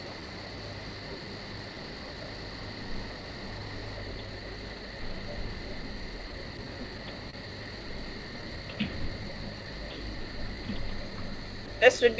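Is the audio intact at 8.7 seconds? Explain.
No. Between 8.41 and 9.26 s there are scattered short gaps: a few packets went missing and were concealed by extending the preceding sound, leaving brief ticks or smears. Around that, repeated timing corrections run from 0.20 to 12.04 s. The receiver stretches the audio to 98% speed, inserting roughly a fifth of a second in total, heard as faint hiccups. They stem from clock drift between sender and receiver, with the sender's clock running about 3% slow so the jitter buffer keeps draining.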